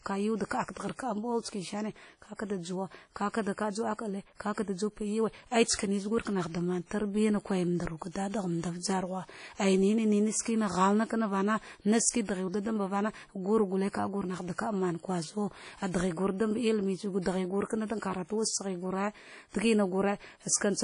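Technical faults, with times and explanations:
Throughout, WMA compression: the speech sounds washy and ringing, with a hiss that swells and fades along with the voice, and there is nothing above about 10.1 kHz, so the top end is dull. This is likely a transform codec working at a low rate, which fits roughly 32 kbps. Coarse quantisation spreads noise across each long block, and weak spectral lines are dropped to zero, including the whole upper band.
5.75 to 5.79 s, pre-echo: a short burst of hiss arrives just ahead of a sharp attack, and the onset itself sounds softened and smeared rather than crisp. The attack falls late in a coding block, and the quantisation noise, sized for the loud part, is spread evenly over the whole block. That noise therefore fills the quiet stretch before the transient too, smearing it back by about 41 ms.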